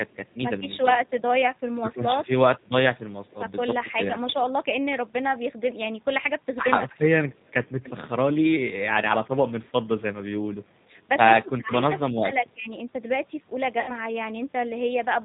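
From start to finish, the speech carries the sound of the G.729 codec, and the damage is plainly audible. The codec does not send the waveform. It models each 10 ms stretch as a vocal tract filter, a pitch predictor and a few pulses, then rebuilds the sound from those. Everything above 4 kHz is gone, so the speech sounds dull. It also sounds rough and slightly synthetic. This fits an 8 kbit/s G.729A stream.

At 13.80 s, VoIP packet loss concealed by the speech codec takes over until about 13.92 s. The gap points to roughly 80 ms of missing audio, about eight 10 ms frames. With no data, the decoder repeats its last pitch and filter settings and lowers the gain each frame. The speech smears into a buzzy tone or coloured noise that fades. Because each frame builds on the previous one, the speech stays weak for a short time after packets return.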